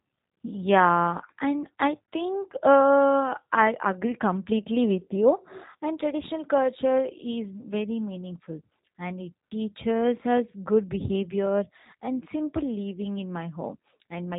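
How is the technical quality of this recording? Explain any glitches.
The speech is plainly degraded by low-bitrate voice coding from start to finish. Throughout, it sounds slightly rough and synthetic, with nothing above 3.8 kHz. That is the G.729 codec at work, which fits an 8 kbit/s stream rebuilding speech from a vocal tract model and sparse pulses.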